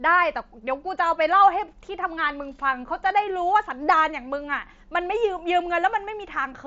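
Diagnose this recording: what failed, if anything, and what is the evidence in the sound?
Nothing stood out on listening to this speech recording; no stage of the chain shows a failure.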